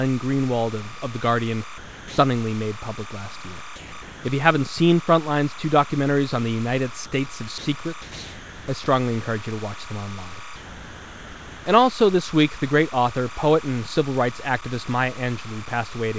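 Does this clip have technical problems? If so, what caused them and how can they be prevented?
Yes. Timecode bleed runs throughout: a chirping warble alternating near 1 and 2 kHz at 29.97 frames per second, roughly 20 dB below the speech. Separate timecode cables and tracks from audio, and use shielded, balanced lines.

Low bit depth without dither also runs throughout. The grit follows the speech, with error roughly 20 dB below it, and it likely comes from truncation to about 7 bits. Keep at least 16 bits, and dither whenever reducing word length.

Sound dropped by the voice detector replaces speech with steady comfort noise at 1.78–2.18 s, just before "made public last year", and again at 3.76–3.92 s, just after it. It recurs at 4.02–4.24 s, 7.06–7.12 s, 7.58–7.66 s, 8.02–8.68 s, 8.84 s just before "encourage you to watch", and 10.56–11.66 s. A voice detector likely misjudged speech as background. 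Lower its threshold, lengthen its hangover, or disable discontinuous transmission.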